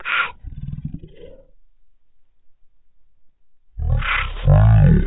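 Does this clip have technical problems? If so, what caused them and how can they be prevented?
Yes. For the whole clip the speech sounds drastically low and slow, dragged down to about a third of its natural pace, with the pitch sunk by about 19 semitones, over an octave and a half. This is a wrong sample rate fault: the samples are played far slower than they were captured, with no conversion, which fits 48 kHz audio being played at 16 kHz. Declaring the true sample rate and resampling whenever rates differ prevents it.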